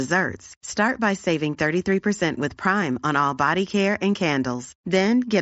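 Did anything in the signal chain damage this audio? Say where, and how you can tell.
No, nothing in the chain damaged this speech; it sits on a Bluetooth mSBC headset link whose band stops near 7.7 kHz, which is that wideband codec's normal limit, not a fault.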